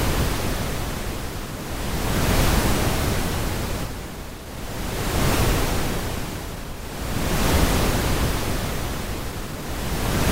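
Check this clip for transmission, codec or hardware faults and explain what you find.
Two transmission faults sit close together just before the middle of the clip: a skip ahead, followed almost immediately by a jitter buffer speed-up.

At 3.83 to 3.85 s the sound jumps forward, with roughly 0.7 s of audio lost. Later audio was already queued, and that stretch was discarded, either in transit or when the jitter buffer overflowed. The two sides are spliced almost directly with no silence or fill. That direct splice is what separates a skip ahead from a dropout, where you would hear a gap or muted patch.

From 3.94 to 4.64 s a jitter buffer speed-up follows. The receiver was holding more audio than it targets, so it shed short pitch-period-sized pieces over and over, about 70 ms in total. The sound runs at 108 percent of normal speed, slightly hurried, but its pitch stays put. That unchanged pitch distinguishes it from a wrong playback rate, which would raise the pitch along with the speed.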